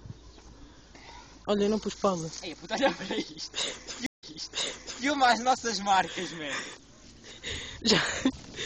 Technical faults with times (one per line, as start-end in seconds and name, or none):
4.06-5.06 stream reconnect